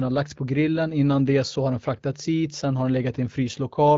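No faults found: the speech passes through the AMR wideband (HD Voice) path at 12.65 kbit/s, a rate where that codec's light coding footprint is expected and nothing further stands out.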